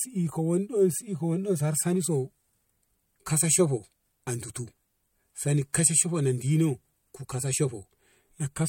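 Speech, with pre-echo at 5.73 s: hiss rising about 19 dB smears 12 ms before an attack, a spectrogram haze ahead of the onset, suggesting a 26 ms block without short-block switching.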